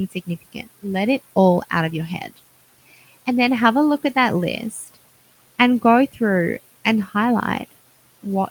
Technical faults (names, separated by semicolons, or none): speech cut by the noise suppressor